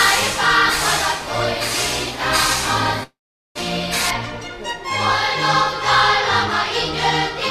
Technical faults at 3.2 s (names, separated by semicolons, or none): long network dropout